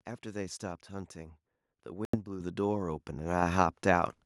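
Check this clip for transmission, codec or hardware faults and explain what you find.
Two kinds of fault are present in this speech clip: a short gap consistent with a Bluetooth dropout, and two sudden level jumps from the microphone volume being stepped up.

From 2.05 to 2.17 s the sound cuts out, then picks up further along rather than where it stopped. This is likely a Bluetooth dropout: packets missed their delivery deadline to the headphones and were discarded, leaving roughly 84 ms of silence, which fits several lost packets.

At 2.40 s and again at 3.42 s, the voice and the background noise both jump louder in a single step, by about 8 dB and then about 4 dB. This is the microphone volume being stepped up: the call software judged the input too quiet and raised the device's input level.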